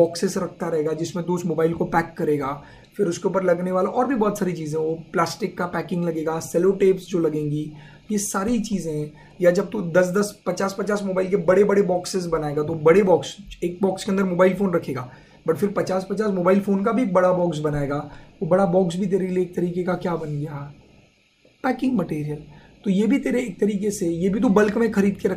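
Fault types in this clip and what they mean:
No technical faults are audible.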